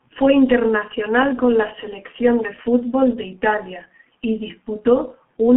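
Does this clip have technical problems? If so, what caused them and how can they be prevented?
Yes. Throughout the speech, the G.723.1 codec leaves nothing above 3.8 kHz, with a telephone band of 150 Hz to 3.4 kHz. Its 30 ms frames and slowly updated voice model make the speech muffled and hoarse with smeared consonants, consistent with roughly 6 kbit/s. To prevent it, route the call through a wideband codec such as G.722 or Opus.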